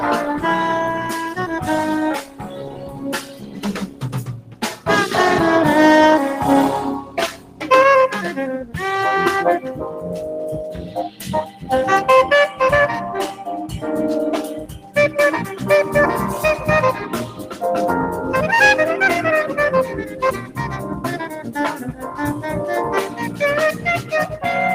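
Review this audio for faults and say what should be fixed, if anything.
Throughout, the level pumps and thins by around 10 dB as held sound and decaying tails sink. This is a speech-tuned noise suppressor applied to music or sounds, treating steady content as noise.

Sound drops by about 8 to 12 dB at 2.22–4.87 s, 6.99–7.64 s, 10.77–11.7 s, 14.6–14.96 s, 17.28–17.62 s, 20.04–22.42 s and 23.08–24.38 s. This is sound cut by the noise suppressor, which mistook it for noise and pulled it down.

To prevent this, disable speech noise suppression for non-speech material or switch to a mode that leaves sustained tones and reverb tails alone.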